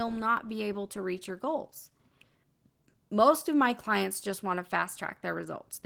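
From start to finish the speech carries Opus voice compression. It sounds like the hybrid mode at around 16 kbps, with SILK's coarse excitation making it plainly hoarse and a bit robotic, and a CELT layer coding the band above 8 kHz, in 20 ms frames.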